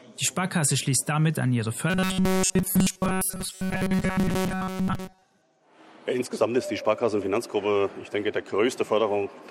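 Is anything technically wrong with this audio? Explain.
Yes. Robotic sound from repeated short buffers occurs from 1.90 to 5.23 s. New audio likely arrives too seldom, so a short slice is replayed while real material is skipped. The loop imposes a rigid, metallic 188 Hz buzz across the whole stretch, which fits a repeat of about 5.3 ms.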